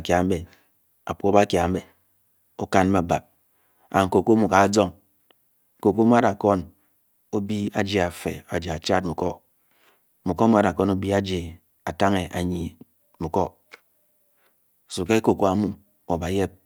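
No technical faults can be heard anywhere in the speech. Nothing in the signal stands out as going wrong at any point.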